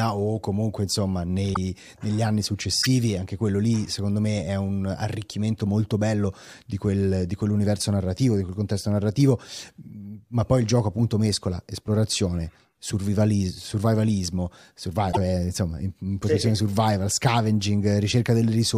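Brief chirps or noise bursts, each with a small jump forward in the speech, occur at 1.53 s after "o comunque insomma", at 2.81 s after "negli anni", and at 15.11 s after "survivalismo survival". These are likely a broken MP3 bit reservoir: after dropped frames, the next frames decode borrowed bits from the wrong data.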